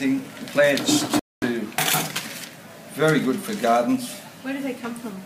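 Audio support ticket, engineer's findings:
Rebuffering stall, 1.19–1.42 s: player buffer ran dry, playback halted until data arrived. Sound drops to silence, resumes exactly where it stopped. Nothing lost, about 230 ms added.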